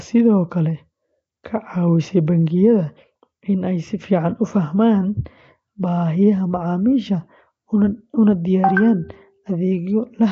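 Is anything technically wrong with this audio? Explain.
Yes. The speech carries Nellymoser compression damage from start to finish. It is plainly audible. A rough, hissy halo hangs around the speech, and the sound is smeared, as if heard underwater. Nothing is present above 7.7 kHz. The likely cause is the old Flash microphone codec, Nellymoser Asao. It codes short blocks at a fixed, very low bit budget. Weak bands get no bits and are filled with noise, which produces the hiss. The damage level fits a rate around 32 kbps.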